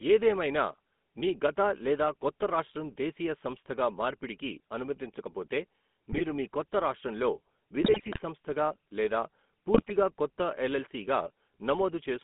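GSM full-rate codec, present for the whole speech clip: the speech has the buzzy, gravelly roughness of a coder that models the vocal tract and excites it with a sparse, regularly spaced pulse train, which fits the 13 kbps full-rate scheme. Coding damage is plainly audible. The line band runs from 200 Hz to 3.5 kHz, so the low bass and the upper consonant detail are gone.

GSM bit errors strike three times. From 6.12 to 6.21 s, just after "దేశీయ సంస్థగా మార్పిడికి అనుమతించకపోతే", corrupted parameters reach the decoder, and a brief squawk bursts out as bad filter and gain values bend the spectrum and push the level up. From 7.82 to 8.20 s, ending just before "సంస్థగా లేదా", a longer stretch gargles and pops. From 9.74 to 9.93 s, right after "సంస్థగా లేదా", the sound breaks up again.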